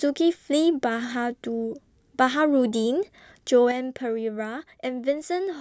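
At 3.71 s the speech abruptly drops by about 6 dB and stays at that lower level to the end of the clip. The likely cause is one channel dropping out of a stereo recording: once the two sides are summed to mono, material shared by both loses half its contribution. On a waveform the envelope steps down sharply at 3.71 s, and a spectrogram shows every band dimming together at that instant.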